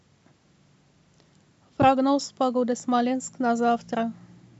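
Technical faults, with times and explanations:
No technical faults can be heard in the speech.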